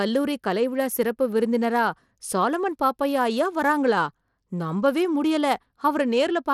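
Throughout the speech, the treble is thin and flickering, with a gritty, grainy edge. This is likely Bluetooth SBC compression with a starved bit allocation, consistent with about 96 kbps. On a spectrogram, nothing appears above 17.3 kHz, and the upper bands blink on and off in patches.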